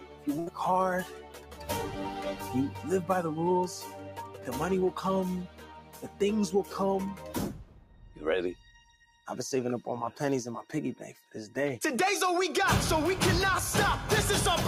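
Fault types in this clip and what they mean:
Noise suppressor applied to music or sounds, throughout: a suppressor tuned for speech stays active across the whole clip, treating sustained tones and decays as noise, so the level swings by around 10 dB and held sound pumps and thins.
Sound cut by the noise suppressor, at 0.0–0.27, 1.04–1.70, 2.70–2.86, 3.80–4.51, 5.45–6.21, 7.14–8.23, 8.54–9.26 and 11.15–11.33 s: the suppressor judges these stretches to be noise and pulls them down by about 6 to 11 dB, so sustained parts sink and tails shorten.
Burst of packet loss, at 0.39–0.49 s: consecutive audio packets arrive too late or not at all. The receiver covers 71 ms by stretching and fading the last sound, then resumes with 80 ms of audio skipped.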